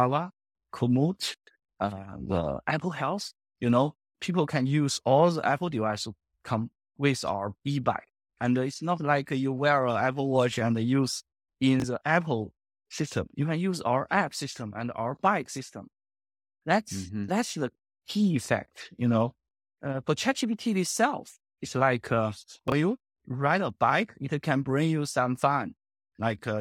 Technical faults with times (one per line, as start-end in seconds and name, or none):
11.80-11.84 chunks out of order
22.68-22.72 chunks out of order